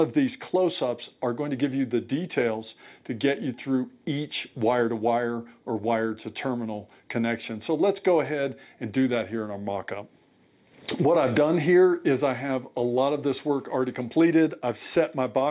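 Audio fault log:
No faults heard anywhere in the recording.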